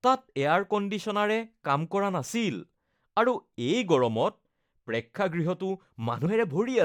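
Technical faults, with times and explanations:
6.25 s, compressed frames skipped: about three encoded frames of 23.2 ms each were missing or rejected by the decoder, so the speech jumps ahead by around 70 ms.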